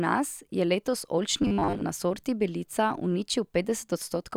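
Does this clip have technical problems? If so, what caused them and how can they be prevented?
Yes: from 1.42 to 1.83 s the speech turns into robotic sound from repeated short buffers, a stiff metallic buzz at 100 Hz, which fits a 10 ms chunk being looped. The likely cause is audio arriving too slowly, with most of it replaced by repeats. A larger jitter buffer or steadier delivery would prevent it.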